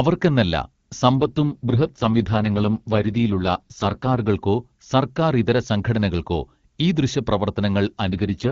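A speech clip with two AMR rate drops: from 1.20 to 4.30 s and again from 8.08 s to the end, the voice turns rough and synthetic with no gap or narrowing of the band, which fits the AMR-WB coding falling from 23.85 to 6.6 kbit/s on a weak radio link.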